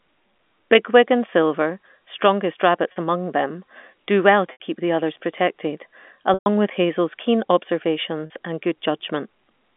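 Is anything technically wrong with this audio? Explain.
Yes. Packet loss with pitch repetition occurs at 2.92 s (40 ms, just before "among them do well"), 4.52 s (80 ms, between "among them do well" and "keep the others protected"), 6.34 s (120 ms, after "keep the others protected") and 8.26 s (40 ms). Each gap is bridged by looping the last pitch period, which fits 20 ms packets. The 40 ms losses sound like a briefly held buzz, while the 120 ms loss fades toward silence before the audio cross-fades back. The G.711 telephone band underneath is intact.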